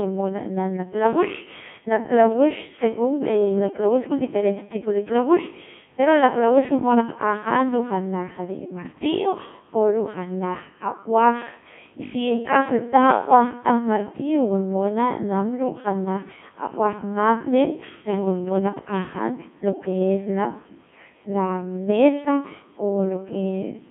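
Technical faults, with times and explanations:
throughout, Codec 2 vocoder: speech is resynthesised from sine waves using only pitch, voicing, energy and envelope, sounding heavily robotic and buzzy within 150 Hz to 3.4 kHz, fitting a 1.6 kbit/s mode.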